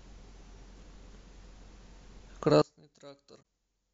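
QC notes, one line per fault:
2.62 s to the end, one channel inverted: the speech collapses by about 29 dB and what remains is a faint residue. The likely cause is one stereo channel flipped in polarity, so the shared, centred content cancels when the channels are summed to mono. On a waveform the envelope abruptly shrinks to a sliver; a spectrogram shows the energy across the band dropping to a faint trace.
3.38 to 3.43 s, damaged data in a compressed stream: a short glitch of roughly 40 ms cuts across the already weakened sound. Corrupted bytes make the decoder misread frames, lose sync and hunt for the next valid frame header before carrying on. A spectrogram and the waveform show a brief disruption with a discontinuity where normal decoding picks up again.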